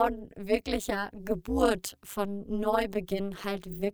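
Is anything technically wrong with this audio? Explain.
Yes. Throughout the speech there is overlap-add ripple: frames were rejoined with non-constant overlap gain, so level dips about 60 dB once per frame, around 200 times a second, giving a metallic buzz with extra tones around each note.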